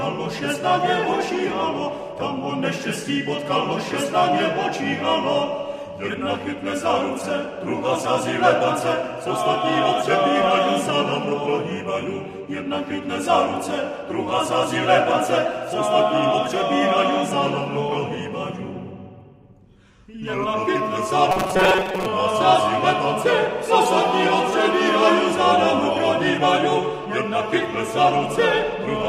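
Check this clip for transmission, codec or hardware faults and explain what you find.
One fault stands out: robotic sound from repeated short buffers, from 21.31 to 22.07 s. For most of that stretch the sound collapses into a rigid, metallic buzz at about 188 Hz that only loosely tracks what came before. The likely cause is audio arriving too slowly, so the player loops a fragment of roughly 5 ms, one period of 188 Hz, in place of the missing material. Unlike codec warble, the buzz holds one steady pitch.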